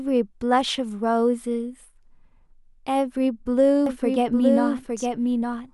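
A doubled audio track begins abruptly at 3.86 s and runs to the end of the speech. From that point a second full-band copy trails the original by roughly one second, sitting about 5 dB lower, with no decay or room colouring to soften it. The two copies overlap out of step, so each stretch of speech is heard again a beat later. The likely cause is a slower second capture path or an edit holding two offset copies.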